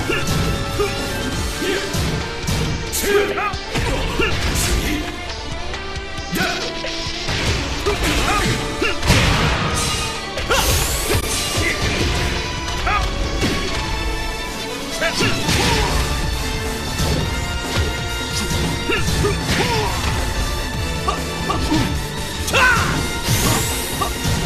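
A brief fault from 11.2 to 11.23 s is a corrupt frame concealed: the decoder detected damaged AAC data, which fits about two frames, and smoothed over the gap.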